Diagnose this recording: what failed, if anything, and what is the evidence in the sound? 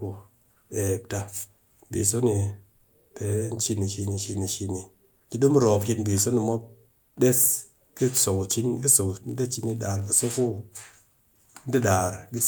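Block size mismatch (padded) in the buffer stage: from 9.08 to 10.35 s, after "ka so", zero-filled gaps give a 46.9 Hz buzz, fitting 1024-sample reads, with pitch unchanged, unlike resampling faults.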